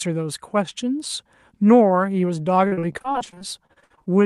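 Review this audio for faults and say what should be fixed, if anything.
Repeated packet loss (robotic sound) spans 2.67 to 4.08 s. Gaps up to 58 ms are patched by extending earlier sound, so the speech turns choppy and robotic. A steadier network link and forward error correction would prevent it.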